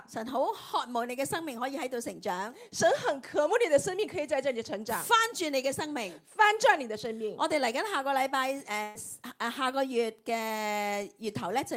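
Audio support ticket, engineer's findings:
Burst of packet loss at 8.83 to 8.98 s: about 120 ms lost in transit, receiver's concealment stretches the last sound and fades it out, then playback jumps ahead with that chunk gone.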